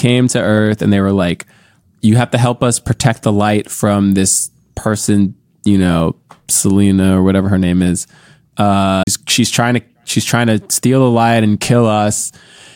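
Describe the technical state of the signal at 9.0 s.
At 9.03 to 9.07 s the speech is interrupted by a CD skip: the laser has jumped to a different turn of the disc's spiral, so playback mutes for roughly 40 ms, then resumes from another point, just before "she's trying to she's". What separates it from an ordinary dropout is that the material doesn't pick up where it stopped; the timeline itself lurches, displaced by one or more disc revolutions rather than merely silenced.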